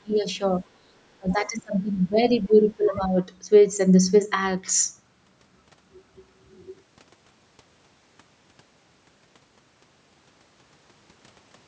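An echo canceller that likely could not tell the near talker from loudspeaker echo while both sides spoke at once turned the speech down, causing speech suppressed in double talk from 0.00 to 0.25 s, at 0.88 to 0.94 s and across 1.18 to 3.17 s. The speech dips by up to about 20 to 25 dB and breaks into pieces, about one and a half seconds in total over the longest stretch. Residual echo the canceller likely failed to remove lets the other side's voice leak through from 2.84 to 2.90 s. It is a brief scrap sitting about 15 dB below the speech.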